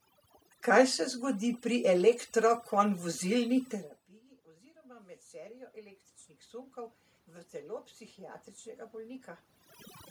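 Overdone noise removal runs through the whole clip. The noise reducer is set so aggressively that frequency bands near its noise estimate are pulled down or switched off, taking the softer parts of the speech with them. The room background collapses into near silence dotted with twinkling specks.

Automatic gain rising occurs from 4.46 to 7.04 s, just before "v telo psihiatričnega". After the input fell by about 24 dB, around where the talker shifts away from the microphone near 3.5 s, the gain control slowly raised its gain by about 8 dB. Voice and background swell together over those two and a half seconds.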